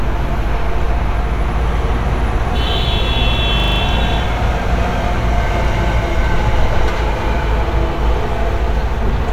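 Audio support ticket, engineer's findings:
System hang loop, 3.6 to 3.8 s. A 40 ms slice of sound repeats five times at 25 Hz, a rapid rattling stutter. Host or driver stalled while the audio device kept replaying its ring buffer, which fits a 40 ms buffer. About a fifth of a second lost.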